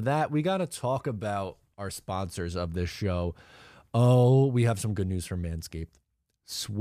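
No technical faults can be heard anywhere in the speech recording, and the signal stays continuous and steady throughout.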